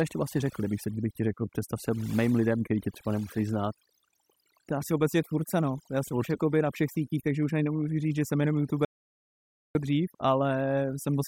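A noise reduction stage was set far too aggressive across the whole speech recording, pulling individual frequency bands down whenever they neared its noise estimate. This is overdone noise removal: the background drops and breaks up into twinkling specks.

At 8.85 s, right after "říct že jsem jenom", the input signal was likely lost while recording carried on writing silence, an audio dropout to silence. For about 0.9 s, until 9.75 s, the sound cuts to complete silence with no room tone, and whatever was said there is gone.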